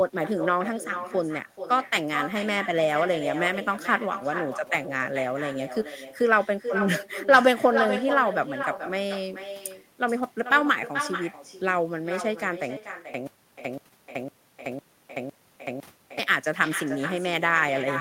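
With no echo canceller at the far end, the returning signal is never removed: the other side's loudspeaker feeds its microphone, and the speech travels back across the network. Throughout this speech recording, every phrase is trailed by a quieter copy about 9 dB down, arriving roughly 0.4 s later, thinner than the original. From 12.77 s to 16.19 s the playback likely stalled and retried, producing a stutter with silent gaps. A 130 ms fragment repeats six times, each followed by 376 ms of digital silence, giving an even 506 ms cycle. The audio that should have filled that span is lost.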